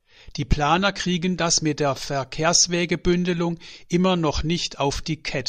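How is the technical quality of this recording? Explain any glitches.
No glitches to report; nothing in the recording registers as a technical fault.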